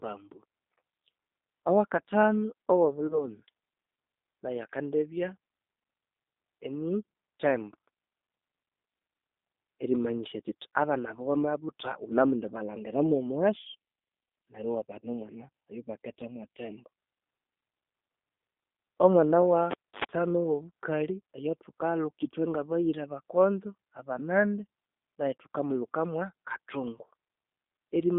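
Throughout, the speech carries the G.729 codec at 8 kbit/s. The band runs from about 250 Hz to 3.7 kHz, and the codec damage is plainly audible. Unlike a simple telephone-band filter, which only dulls the sound, this codec rebuilds the speech from a vocal tract model, a pitch predictor and a few pulses per frame. That gives it a rough, slightly synthetic texture on top of the missing highs.

From 3.07 to 3.28 s, and again from 15.00 to 15.08 s, VoIP packet loss is concealed by the speech codec. Each event loses about 30 ms of audio, which fits three 10 ms frames. Instead of leaving a hard gap, the decoder keeps extending the last pitch and filter with falling gain, so the sound smears into a brief buzzy tone. At 3.07 s the disturbance runs well past the lost audio, to about 3.28 s, because each rebuilt frame leans on the damaged one before it.

From 19.71 to 20.04 s the cable is pulled and plugged in. 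A pop opens the event, followed by about 282 ms of near silence. A 78 ms burst of 50 Hz mains buzz comes while the plug only half connects, and a second pop marks the sound returning. The true silence, the hum and the paired clicks set this apart from the codec's smooth, fading buzz.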